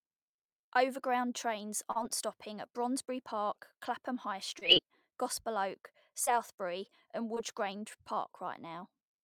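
Brief smears interrupt the speech at 1.91 to 1.97 s, just before "stopping at", then at 4.59 to 4.63 s, 6.25 to 6.29 s and 7.35 to 7.38 s. These are short concealed packet loss: about 40 ms of audio, then about 20 ms each time, arrived too late to decode. The receiver extended the preceding sound to cover each gap and then blended back into the real audio.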